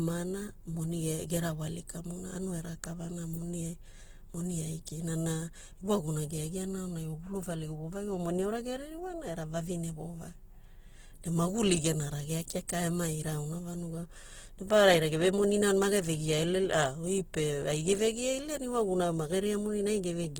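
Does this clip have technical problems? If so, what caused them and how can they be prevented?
Yes. Opus compression, throughout: the speech sounds rough and grainy, with its full bandwidth kept but filled coarsely, likely from music-mode Opus at a rate that fits about 16 kbps. Raise the bitrate or use the speech mode to prevent it.

Pre-echo, at 12.68 s just after "ne maguli gena rageai": a short hiss of about 11 ms comes before a sharp attack, because the block's quantisation noise spreads into the quiet moment ahead of it. A higher bitrate with shorter transform blocks on transients prevents this.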